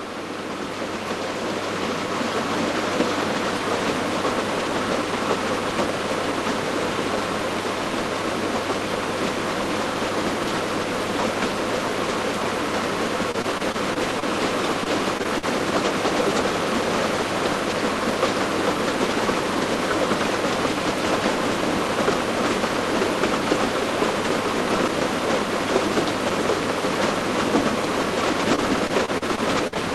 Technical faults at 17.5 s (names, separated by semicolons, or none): none